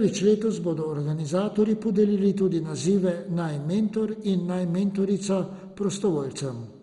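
Throughout the speech, the encoder appears to be starving its sub-bands of bits, which points to a likely cause of heavy MP2 compression at a low rate, consistent with roughly 56 kbps. Upper bands are shut off entirely, leaving nothing above 11.2 kHz, so the speech sounds dull and lacks air. The remaining bands are coarsely quantised and switch on and off, producing a gurgling, granular distortion.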